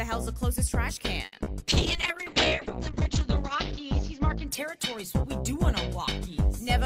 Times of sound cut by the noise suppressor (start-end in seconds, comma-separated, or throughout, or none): none